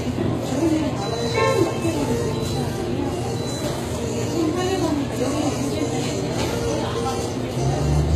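Throughout, the audio was likely passed through HE-AAC compression at a low bitrate, consistent with about 20 kbps. The treble is regenerated from copied lower bands rather than coded, so upper harmonics misalign. The codec damage is plainly audible, and nothing remains above 14.9 kHz.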